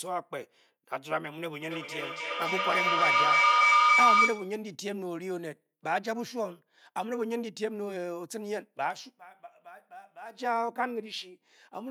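From 1.61 to 4.65 s a feedback howl takes over: a microphone is picking up a loudspeaker carrying the same call, and each trip around that loop comes back louder. Instead of decaying, the repeats pile up and collapse onto the pitch the loop favours, a tone around 1 kHz, with the loop coming round roughly every 0.3 s, that climbs to about 10 dB above the speech before it stops.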